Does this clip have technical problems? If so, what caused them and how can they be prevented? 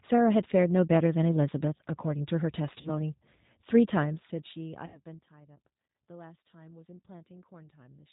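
Yes. The whole speech clip was carried by the G.729 codec at 8 kbit/s. It models each 10 ms frame with a vocal tract filter, a pitch predictor and a few pulses, so everything above 4 kHz is gone and the voice sounds plainly rough and synthetic. A wideband codec such as G.722 or Opus, with enough bandwidth, prevents this.

VoIP packet loss concealed by the speech codec occurs from 2.81 to 2.91 s and from 4.86 to 5.02 s. About 40 ms and then 80 ms of audio went missing, which fits two and four lost packets. The decoder stretched its last frame into a sound that fades, and the sound stays weak briefly afterwards. A larger jitter buffer, forward error correction and a network with less loss would prevent it.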